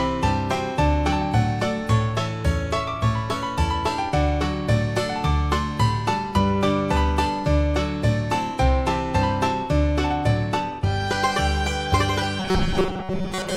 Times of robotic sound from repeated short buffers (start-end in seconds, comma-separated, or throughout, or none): 12.40-13.57